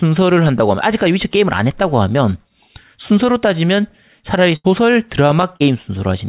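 At 4.56 s a burst of packet loss begins. About 80 ms of audio never arrived, so the receiver extended the last sound, fading it down, until 4.67 s, when the audio resumes further on. A spectrogram shows a flat, dimming continuation below the call path's 4 kHz ceiling, then an abrupt jump.

At 5.56 s, short concealed packet loss replaces about 40 ms with synthesised continuation, heard as a brief smear before the real audio blends back in by 5.63 s. The spectrogram shows a short, unnaturally smooth patch.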